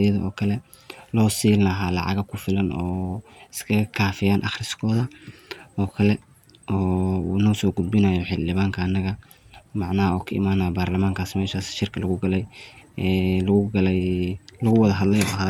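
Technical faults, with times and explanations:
No technical faults detected.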